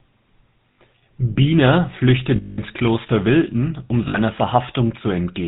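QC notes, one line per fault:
Throughout: GSM full-rate codec. The speech carries a plainly audible buzzy, gravelly roughness, with nothing above 4 kHz. The coder rebuilds the vocal tract from a coarse pulse excitation that keeps one sample in three, which fits 13 kbps full-rate GSM.
0.72–0.78 s, 2.36–2.59 s, 4.08–4.18 s: lost GSM frames. Each gap becomes a rough, metallic ring, about 60 ms at 0.72 s and 4.08 s and 220 ms at 2.36 s. The decoder filled them by repeating the last good frame's settings.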